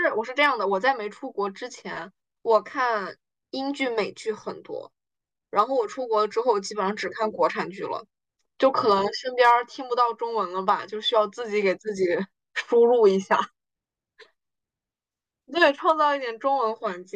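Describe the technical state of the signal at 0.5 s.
Hard clipping runs from 0.43 to 0.46 s: the speech peaks overdrive a stage by about 1 dB and are cut flat, giving a brief crackle rather than soft clipping's rounded, warm distortion.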